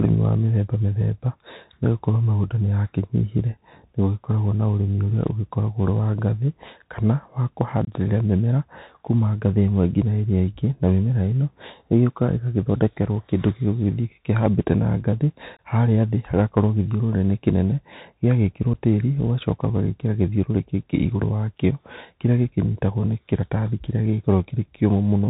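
Throughout, the speech carries Bluetooth CVSD headset codec damage, plainly audible and consistent with a 64 kbps link. The one-bit delta coder passes nothing above 4 kHz, its adaptive step lags loud high-frequency energy so sibilants turn scratchy, and granular hiss sits under the speech.

Unconcealed Bluetooth headset packet loss cuts hard-edged holes at 7.85 to 7.89 s and 15.57 to 15.59 s, each 22.5 ms of missing audio, pointing to a few consecutive packets. A single-packet 7.5 ms dropout follows at 18.74 s. Each gap leaves a brief hole with abrupt edges.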